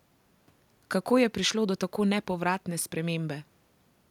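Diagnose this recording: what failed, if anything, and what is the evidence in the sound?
No fault can be heard.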